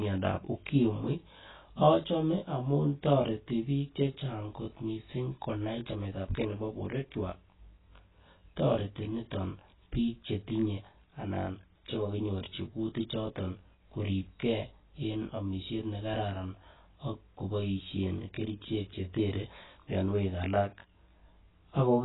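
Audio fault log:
throughout, channel delay (comb filtering): The speech sounds rough and slightly doubled, with a character that never changes. One channel trails the other by roughly 20 ms, and when the two are summed to mono, the shared content cancels at a dense row of evenly spaced frequencies starting near 20 Hz. These fixed notches comb through the whole spectrum, thinning the body of the sound and giving it that rough, doubled colour.
throughout, AAC compression: The speech is dull and muffled, with nothing above about 3.9 kHz, and sustained sounds and sibilants carry a watery, warbling smear. The likely cause is heavy AAC-LC coding at a very low rate, which fits roughly 16 kbps. To save bits, the encoder drops the top of the spectrum, leaves gaps in the remaining bands or fills them with substitute noise, and that patching produces the swirling, fizzy texture.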